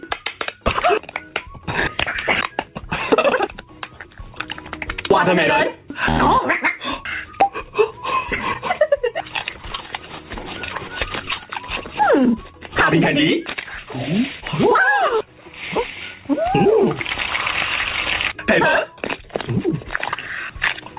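At 14.40 to 14.44 s there is a short concealed packet loss. About 20 ms of audio never arrived in time, and the receiver filled 17 ms of the gap by extending the preceding sound before blending back into the real signal. It is heard as a brief smear or wobble. On a spectrogram, already empty above 4 kHz from the narrowband call codec, the patch shows as a blurred, repeated slice; the waveform shows an overly regular segment with soft joins.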